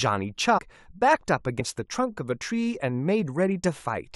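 At 0.57 s and 1.59 s, compressed frames are skipped. The speech jumps ahead, losing roughly 70 ms and then 50 ms.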